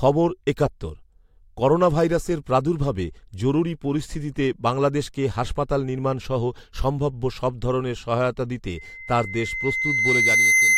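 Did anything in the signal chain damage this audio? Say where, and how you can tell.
Yes. Loudspeaker feedback squeal at the microphone-loudspeaker loop: from 8.76 s, a 2.1 kHz tone swells over roughly a second and a half to sit above the speech, appearing as a brightening horizontal spectrogram line.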